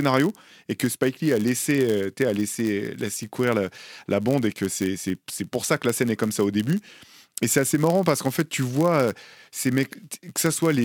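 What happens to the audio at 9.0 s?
A block size mismatch (padded) is running right through 9.0 s, as it does across the whole clip, so nothing special happens at that moment. One stage hands over blocks a bit shorter than the next stage expects, and the leftover is filled with silence. That tiny gap repeats about 100 times a second, giving a steady buzz near 99.6 Hz under the speech, and the speech plays at 0.996 of its normal speed.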